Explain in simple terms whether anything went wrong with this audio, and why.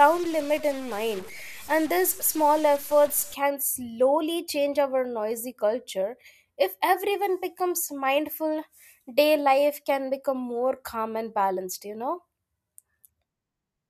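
A stuck bit affects the opening stretch, from the start to about 3.34 s, clearing just before "can slowly change our". Over that part the speech sounds harsh and buzzy, and the quiet gaps fill with hiss instead of silence. The likely cause is one digit in the stored numbers being fixed at the same value, from a faulty connection or converter. That nudges many samples slightly off, and small values near silence flip around it, which is why the pauses turn noisy.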